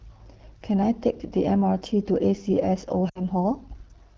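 Rough, raspy speech runs through the whole recording. That is the AMR wideband (HD Voice) codec working at one of its lowest rates; the damage fits roughly 8.85 kbit/s. At such a low rate the pulse-driven vocal tract model has too few bits to follow the voice accurately, so the coding damage is plainly audible, and the band above 6.4 kHz is only shaped noise rather than real detail. From 3.09 to 3.25 s the speech quickly drops to near silence and then recovers weakly. That is lost AMR speech frames: the span fits about three consecutive 20 ms frames, 60 ms in all, that failed their checksum. The decoder bridged the gap by repeating the last good pitch and vocal tract settings at falling gain, which drops the sound to near silence within two frames before normal decoding resumes.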